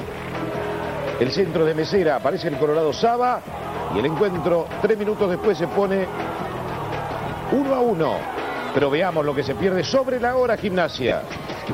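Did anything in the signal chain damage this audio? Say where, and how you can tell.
Yes. The Bluetooth link lost LE Audio frames between 11.08 and 11.12 s, a gap of 30 ms that fits about four LC3 frames. The LC3 decoder concealed the loss by repeating the last good spectrum with randomised signs. Because the phase relationships are scrambled, the sound in that stretch turns into a brief noisy smear instead of a clean continuation. It lasts only a fraction of a second before normal decoding resumes.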